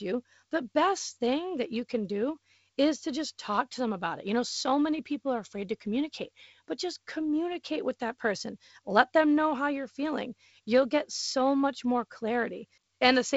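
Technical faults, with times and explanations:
No technical faults are audible anywhere in this speech.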